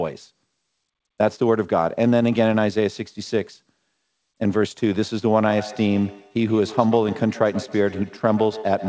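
From 5.49 s to the end of the speech you get feedback echo between two devices. Two devices sharing the room are both on the call, so one plays back what the other's mic sent and that mic picks it up again. Its echo canceller only removes its own playback, so it lets this through. Each word comes back roughly every 150 ms, thinner and ringier, peaking about 15 dB under the speech, all within the 8 kHz top end that fits a G.722 call codec.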